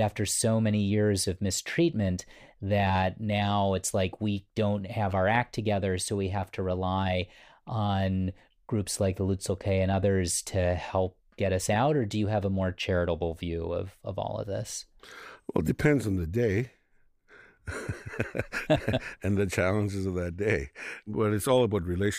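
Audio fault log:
No faults detected in this recording.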